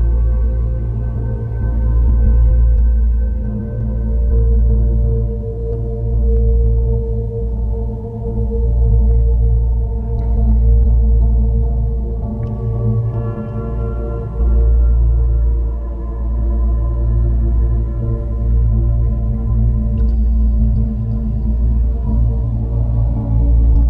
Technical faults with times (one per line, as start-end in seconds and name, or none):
none